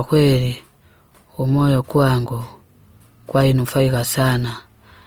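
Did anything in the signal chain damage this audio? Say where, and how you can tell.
Yes, at the codec: throughout, the speech sounds grainy and rough yet reaches about 20.3 kHz. That points to likely Opus compression in CELT mode near 24 kbps, noise-filling starved bands.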